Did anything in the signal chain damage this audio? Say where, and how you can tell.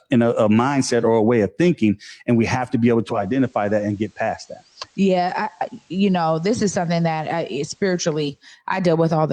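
Yes, at the receiver. From 2.95 s to 8.55 s you get digital radio blending to analogue: a half-second crossfade onto the FM feed, with the level about 2 dB lower and hiss roughly 40 dB under the speech until it blends back.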